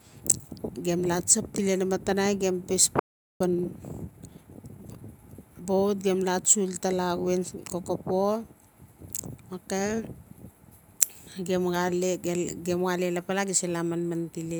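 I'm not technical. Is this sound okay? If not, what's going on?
No. At 2.99 s the speech stops dead for about 0.41 s, then resumes. That's a playback stall, likely the player running short of data. From 3.41 to 5.03 s comes time-compressed catch-up: the speech runs 1.25 times faster at normal pitch, as the player makes up lost ground.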